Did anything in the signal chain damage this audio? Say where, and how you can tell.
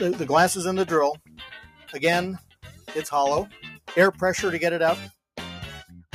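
Yes. A speech-tuned noise suppressor in the call-processing stage was left on for this sound, treating steady tones and ambience as noise. Level swings by around 10 dB throughout, so it pumps. The waveform envelope breathes, and a spectrogram shows sustained bands dimming between attacks.

The sound cut by the noise suppressor is clearest at 1.14–1.45, 1.61–1.91, 2.38–2.9 and 3.47–3.9 s, with drops of about 17, 13, 17 and 17 dB. There the waveform narrows sharply and the spectrogram thins to faint patches, as held or decaying sound is judged noise.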